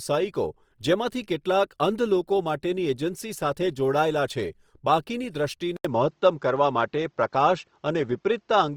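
From the start, the speech carries Opus compression, likely encoded in its music (CELT) mode at a low bitrate near 24 kbps. Bandwidth stays full, up to about 20.2 kHz, but band energy is preserved by noise filling, so the damage is plainly audible as grainy, rough texture.

At 5.77 s the input switches to a poorer device, likely a different microphone or headset profile. An 80 ms silence marks the switch. From then on nothing passes above 7.6 kHz, so the speech turns duller, the level shifts by a few decibels, and a faint new noise floor sits far below the speech.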